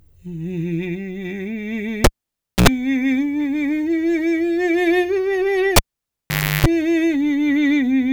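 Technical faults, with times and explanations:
2.04–2.68 s and 5.76–6.66 s, cable pulled and plugged in: a live cable is yanked and reinserted, so each event opens with a pop and drops to near silence (about 0.59 s, then 0.85 s). While only the tip makes contact on reinsertion, mains hum leaks in, 77 ms at 60 Hz the first time and 339 ms at 50 Hz the second, before a final pop as the music returns.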